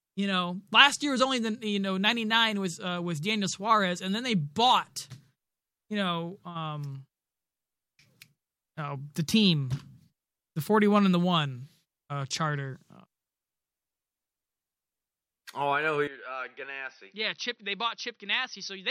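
At 16.07 s, right after "I know who", the speech turns duller and drops about 10 dB in level, with no gap at the change, and stays that way to the end at 18.91 s. The likely cause is an input switched to a poorer device, one that passes nothing above 6 kHz and adds a faint noise floor of its own, far below the speech. On a spectrogram the upper band empties abruptly at 16.07 s. The waveform steps down in amplitude at the same instant.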